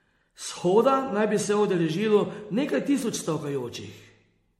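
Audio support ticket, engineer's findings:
Swirly, hollow, smeared speech throughout, with blurred consonant attacks and a hard ceiling at 16 kHz. Smearing worse than the bitrate alone suggests, fitting MP3 at around 62 kbit/s. Likely generation loss: audio decoded and re-encoded roughly seven times. Each pass requantises on a shifted frame grid, compounding noise and spectral holes.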